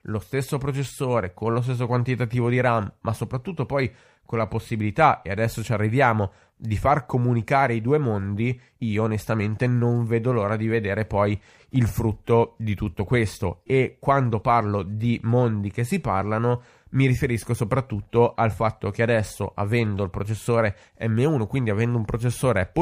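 No technical faults can be heard anywhere in the speech.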